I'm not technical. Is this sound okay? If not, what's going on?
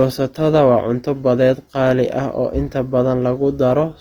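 No. The recording was likely squeezed hard with Opus compression, which saves space by keeping each frequency band's overall loudness while filling in fine detail with copied or noise-like sound. From start to finish the speech sounds rough, grainy and gritty.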